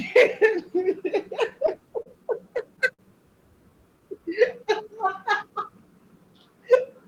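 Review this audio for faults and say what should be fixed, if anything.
Two short stalls from a late packet occur, at 2.02 to 2.08 s and at 2.94 to 3.01 s. In each, a packet was due but had not arrived. The jitter buffer ran dry. The receiver held the last bit of speech for about 33 ms and then about 51 ms. Then it resumed where it had stopped. Nothing is lost, but a sound hangs briefly. Each stall also adds that much to the delay. A deeper jitter buffer or steadier network timing would prevent this.

A jitter buffer slow-down runs from 3.61 to 5.19 s. The buffer was running low or had just raised its target delay, and needed to build up a reserve. It repeated single pitch periods and short stretches of pause many times over. The speech plays at 95% speed with unchanged pitch. About 95 ms is added across that span, so sounds are drawn out. A larger initial buffer target would remove the need to rebuild it mid-call.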